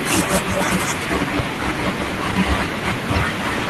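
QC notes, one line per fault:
No audible faults found on this speech clip; nothing to log.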